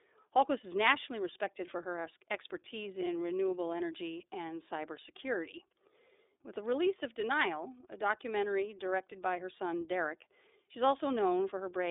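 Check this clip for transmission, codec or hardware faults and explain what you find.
The iLBC codec runs through the whole clip. Coding each 30 ms frame independently, at a rate that fits the 13.33 kbps mode, leaves this speech plainly rough and synthetic, with nothing above 3.8 kHz.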